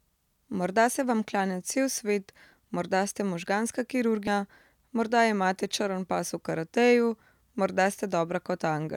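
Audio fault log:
4.27–4.30 s, damaged data in a compressed stream: Right after "morda ste možganska", the speech breaks into a brief glitch lasting about 30 ms. Some bytes in the encoded stream are corrupted at this point. The decoder reads frames that make no sense, or rejects them. It loses its place in the stream and hunts for the next valid frame header. The garbled output in between is heard as a short glitch.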